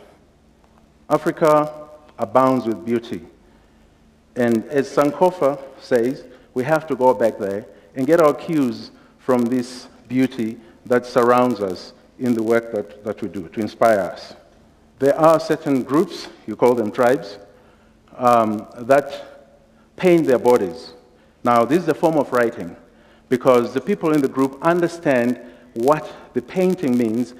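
A steady buzz runs through the whole clip, a fine train of ticks repeating about 86 times a second that grows louder and quieter with the sound itself. It is a filter restarted on every block: the filter discards its stored state at each block boundary and begins again from silence, so every block opens with a small transient. The 86.1 Hz tick rate fits a 512-sample block.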